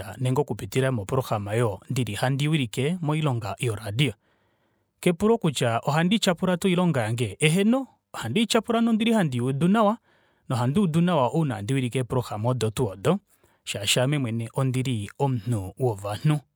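No technical faults can be heard anywhere in the recording; the speech signal stays intact and steady at every point.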